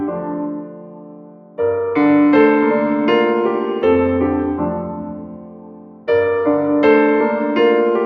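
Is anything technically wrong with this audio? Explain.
Yes. A speech-style noise suppressor was left on this music. It mistakes sustained tones and tails for noise, so the level pumps by around 10 dB while attacks slip through.

There's sound cut by the noise suppressor from 0.04 to 1.59 s and again from 4.78 to 6.08 s. Held material sinks by about 12 dB, and its decays are clipped short.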